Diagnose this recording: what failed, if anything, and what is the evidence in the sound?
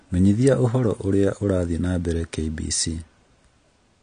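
The damage sits at the codec stage and runs through the whole speech clip: the audio sounds dull and smeared, with a warbling, fizzy edge on sibilants and held vowels. On a spectrogram, energy stops flat at about 9.8 kHz for the entire duration, and the band below shows patchy holes and blotchy noise-filled regions rather than smooth harmonics. The cause is likely AAC compression at a low bitrate, consistent with around 32 kbps, which quantises spectral lines coarsely and discards high bands.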